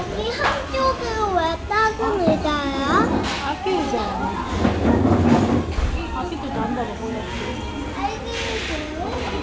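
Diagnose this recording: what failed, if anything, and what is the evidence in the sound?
Nothing failed: the everyday sound comes through the call path intact, with the expected band limit at 8 kHz, which fits a wideband codec such as G.722 at 64 kbps, and no stage shows a defect.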